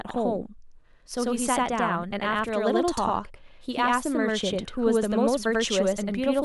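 Every syllable of this speech clip is followed by a second, equally loud copy about 93 ms later, a slap-like doubling that runs throughout. This is channel delay (doubling): one channel lags the other, which fits a 4096-sample buffer, and the mono sum exposes the late copy.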